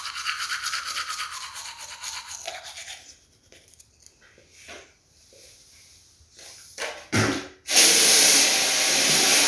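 No technical fault can be heard anywhere in this recording of sounds, and the signal path shows no audible defect.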